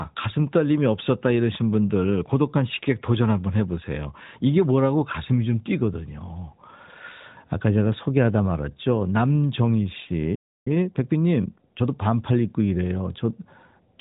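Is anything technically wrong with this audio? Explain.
Yes. There are two faults, one right after the other, in speech carried over an AMR narrowband mobile link. That link passes nothing above 4 kHz and shows light codec damage, which fits the 12.2 kbps mode.

Playback stall, from 10.35 to 10.68 s. The speech stops mid-flow and the output goes silent for about 0.31 s. The likely cause is a player that ran out of buffered data, or had its audio thread blocked. Output stays silent until data flows again. Then the speech resumes.

Time-compressed catch-up, from 10.68 to 11.90 s. Here the speech runs at 1.25 times normal speed, with its pitch unchanged. The player is working off the backlog built up during the stall. It cuts out small pieces of audio and cross-fades across the gaps. This shortens the material without shifting pitch, so the speech sounds hurried for just over a second before normal pace returns.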